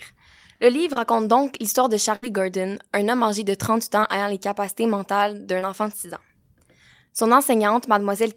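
At 0.93 s the speech briefly smears, a wobble lasting a few hundredths of a second. This is a short concealed packet loss: about 20 ms of audio arrived too late to be decoded, and the receiver extended the preceding sound to cover the hole before blending back into the real signal.

From 2.16 to 2.24 s a held buzz or fading hiss replaces the speech, and the audio then picks up slightly further along. That is a burst of packet loss. About 60 ms of audio never arrived, so the receiver stretched the last sound over roughly 66 ms, letting it decay, and the part in between is lost.

The same short concealed packet loss returns at 4.00 s and again at 5.60 s, each time as a quick smear. Both lost about 20 ms of audio, and the gaps, about 14 ms and 20 ms, were filled by continuing the sound that came just before.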